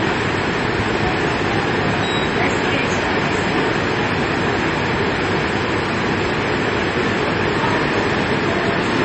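Throughout, nothing sounds above about 8.4 kHz, and two kinds of artefact sit together: those of an MP3 encoding and those of an AAC-LC encoding. That mix, unlike a single codec's uniform coloration, likely comes from transcoding between lossy codecs, pointing to a low-bitrate MP3 re-encoded as AAC-LC.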